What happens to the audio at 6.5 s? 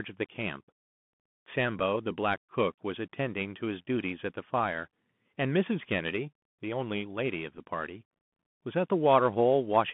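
At 6.5 s the speech is passing through a Bluetooth CVSD headset codec, as it does across the whole clip. Each sample is coded as one up-or-down step that adapts in size, and the link passes only about 150 Hz to 3.5 kHz. The result is thin, muffled speech with scratchy s sounds, strained loud peaks and a granular hiss underneath.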